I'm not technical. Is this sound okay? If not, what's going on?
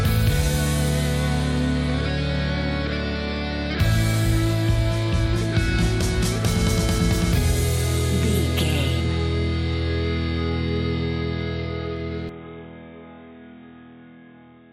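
No. At 12.29 s the input switched to a poorer device: the sound abruptly turns muffled and noticeably quieter to the end, likely because recording jumped to a lower-quality microphone.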